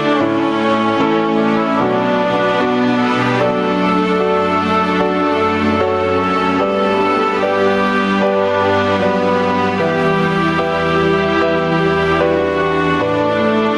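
From start to finish there's gain pumping going on. The gain keeps getting yanked down every time something loud comes through, a swing of something like 5 dB. The likely culprit is input gain cranked way too high, with a fast limiter or compressor clamping down on each loud peak. The result is a squashed, flattened sound where loud and soft parts sit much closer together than they should.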